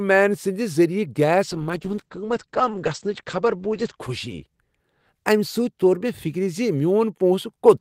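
From 1.44 s to about 5.13 s the speech goes through a call bitrate drop. The connection's bandwidth estimate fell, so the encoder went from 40 kbps down to 10 kbps and sat at the bottom for about 2.1 s. At that rate it codes much more coarsely and narrows the audio band from 20 kHz to 8 kHz. You hear the voice turn muffled, rough and watery until the rate climbs back.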